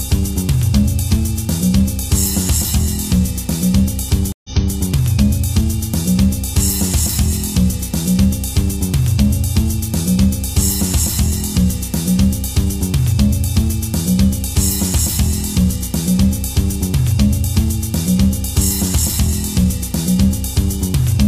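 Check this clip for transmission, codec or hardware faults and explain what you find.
Two faults here. A switching supply whistle runs the whole way through, a thin high tone wandering between about 2.46 and 2.99 kHz, sitting roughly 35 dB under the audio. That's a power supply in audible burst mode or beating with another one, its pitch shifting as the load varies.

Then a stream reconnect between 4.32 and 4.77 s. The connection dropped and there's a 120 ms gap, then a fresh decoder picks up 325 ms earlier than where it cut, so you hear a short stretch repeat, easing back in as the first frame fades in.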